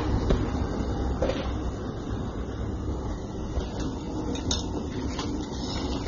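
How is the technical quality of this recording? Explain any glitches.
The technical quality is limited, with one fault running through the whole recording. From start to finish the sound is dull and smeared. Nothing is present above about 7.1 kHz, so the top end feels closed off, and sustained or hissy parts carry a plainly audible warbling, fizzy texture. The likely cause is AAC compression, specifically AAC-LC at a low bitrate; the damage fits roughly 24 kbps. The encoder splits the signal into frequency lines and quantises them against a hearing model. Short of bits, it drops everything above a lowered cut-off and codes the remaining bands coarsely, which produces the gaps and the shimmering texture.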